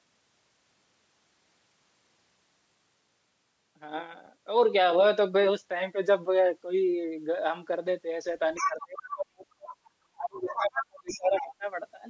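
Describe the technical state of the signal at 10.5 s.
At 10.5 s the speech is being suppressed in double talk, from 10.03 to 11.65 s. The echo canceller likely mistook simultaneous talk for echo and ducked the near talker, so the voice dips and breaks up, falling by roughly 35 dB at worst. On a waveform the envelope collapses in patches, and on a spectrogram the harmonics thin out or blank entirely.

The other side's voice is also leaking through, from 10.49 to 10.86 s. Loudspeaker sound likely escaped the echo canceller and reached the microphone, giving a second voice around 10 dB below the speech. A spectrogram shows a second set of harmonic traces layered over the speech.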